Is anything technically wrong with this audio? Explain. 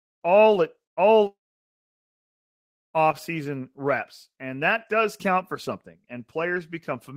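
Yes, there are two transmission faults.

A burst of packet loss at 0.91 to 1.00 s drops about 60 ms. The receiver stretches the last speech into a brief fading buzz or hiss, then jumps ahead.

A long network dropout at 1.27 to 2.97 s, likely, leaves a short fading tail and then about 1.6 s of silence before speech resumes, with roughly 1.7 s missing.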